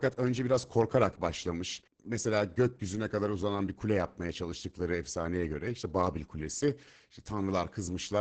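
Opus voice compression runs through the whole speech clip. Nothing sounds above about 8.8 kHz, a wideband limit. The SILK coder quantises the excitation coarsely, so speech comes out muffled, hoarse and slightly robotic. The heavy damage points to a bitrate near 10 kbps.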